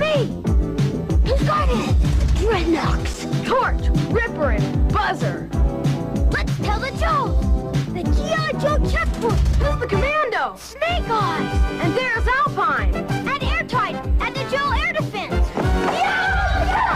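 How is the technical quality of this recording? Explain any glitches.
One glitch stands out, an underrun with held sample at 3.14 s. The output buffer ran dry for about 5.8 ms, a gap of 256 samples, and the converter froze on its last value. Unlike a dropout to silence, the waveform holds flat, so the sound stalls briefly with no click. Nothing was skipped, so playback resumes where it paused and the gap closes softly.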